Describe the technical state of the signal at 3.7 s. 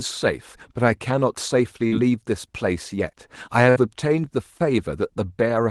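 A burst of packet loss runs from 3.70 to 3.78 s. The receiver conceals the gap by extending the last sound and fading it down over about 58 ms. Audio resumes with roughly 60 ms of the speech skipped, leaving an audible jump in the Opus call stream.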